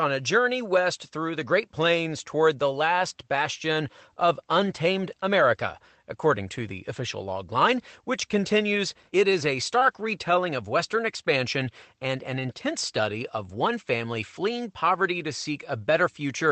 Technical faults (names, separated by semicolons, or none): lost packet rebuilt from error correction; short concealed packet loss